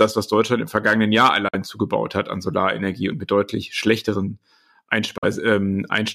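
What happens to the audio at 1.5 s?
From 1.48 to 1.55 s the speech goes silent and resumes just before "zugebaut hat an" as if it had played on, likely a Bluetooth dropout from late packets.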